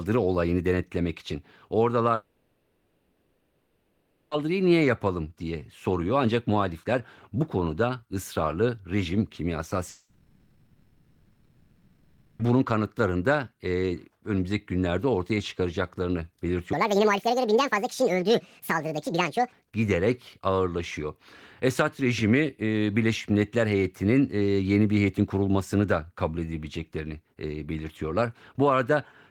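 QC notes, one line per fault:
2.15–4.33 s and 9.89–12.41 s, long network dropout: audio stops for about 2.2 s, then 2.5 s, before "niye yapalım diye soruyor" and between "konuda ısrarlı rejim kimyasal" and "bunun kanıtlarında e önümüzdeki". Each gap is filled throughout by a fading buzz carried on from the last sound, with no true silence, likely packets lost and concealed. Unlike a cut edit, the resumed speech skips ahead.
16.73–19.52 s, section at the wrong speed: between "önümüzdeki günlerde ortaya çıkaracaklarını" and "giderek ağırlaşıyor" the speech runs 1.7 times fast, rising nearly an octave. Pitch and tempo change together, which points to playback on a wrong clock, likely, rather than a pitch shifter, where tempo stays put.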